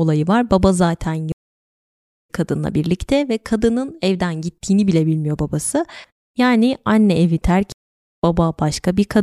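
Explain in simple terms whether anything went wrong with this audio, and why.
The speech cuts out twice, at 1.32 s for nearly a second and at 7.72 s for half a second, then jumps ahead: a stream reconnect skipping roughly 0.7 s and 0.5 s.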